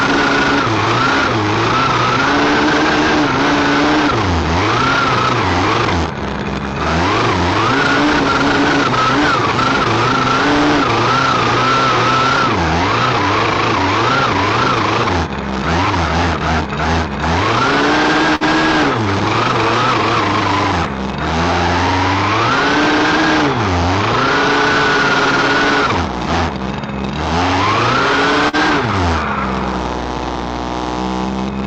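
At 18.35 to 18.44 s the last sound is held and fades before resuming 40 ms further on, a burst of packet loss filled with 52 ms of continuation. At 28.49 to 28.56 s a brief smear or wobble marks short concealed packet loss, where 40 ms of audio missing was covered by 44 ms of continued sound.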